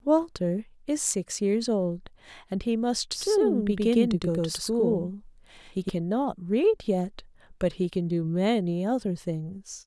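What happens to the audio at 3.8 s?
A doubled audio track runs from 3.12 to 5.90 s, so 3.8 s falls inside it. The speech is likely being captured twice, with the second path lagging about a tenth of a second, giving a hard, roomless echo at roughly equal loudness that starts and stops abruptly.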